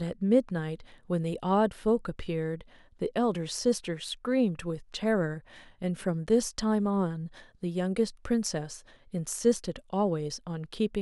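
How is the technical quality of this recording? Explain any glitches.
Nothing in the recording stood out as a technical problem on listening, so there are no glitches to explain.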